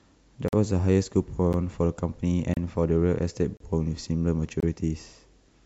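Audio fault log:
0.48–0.53, 1.53, 2.54–2.57, 3.57–3.60 and 4.60–4.63 s: gap between stream segments. The speech drops into dead silence with hard edges at roughly one-second spacing, each hole running from about 10 ms up to 46 ms. That's the player hitting a timestamp seam between consecutive one-second chunks and padding the missing stretch with nothing. No audio is actually lost; silence is just slipped in, which is why it sounds like a clean click-out.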